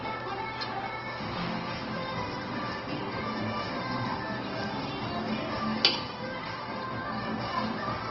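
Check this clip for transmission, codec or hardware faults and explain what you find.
Audible codec damage runs through the whole clip, most likely from Opus compression. Across all of it, tonal parts of the sound turn rough and grainy, which fits Opus in its music mode at a low rate near 16 kbps. With too few bits for fine detail, the encoder keeps each band's energy and fills the gaps with folded or noise-like content. Full bandwidth survives, but on a spectrogram harmonics blur into granular noise with few empty holes.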